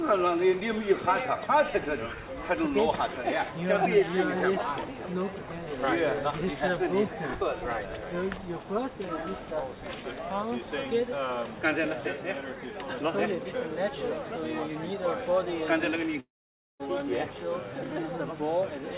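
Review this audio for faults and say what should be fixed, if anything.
From 16.2 to 16.82 s the sound smears into a fading buzz, falls silent, then resumes with 0.6 s missing, likely a long network dropout. A steadier network link with redundant packets or forward error correction would prevent such gaps.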